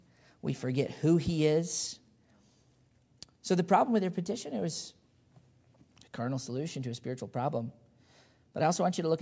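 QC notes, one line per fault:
Nothing stood out on listening to the speech.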